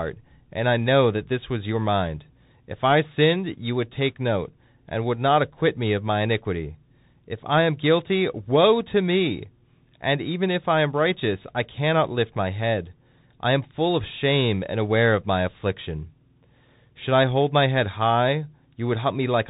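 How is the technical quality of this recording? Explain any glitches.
The speech has been carried through a Bluetooth CVSD headset codec for its whole length, and the damage is plainly audible. CVSD codes each sample as a single up-or-down bit whose step size adapts, at a rate that fits 64 kbps. Nothing above about 3.8 kHz survives, s sounds come out scratchy, and a granular hiss sits beneath the speech. A plain telephone-band filter would sound muffled but clean; here the grain and the frayed sibilants give the codec away.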